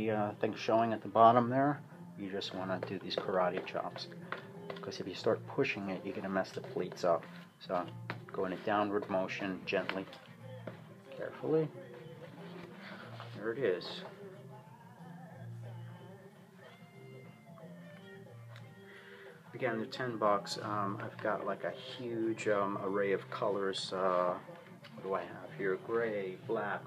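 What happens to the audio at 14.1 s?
Nothing goes wrong at 14.1 s; the audio plays through that moment intact, with no dropout, click or distortion.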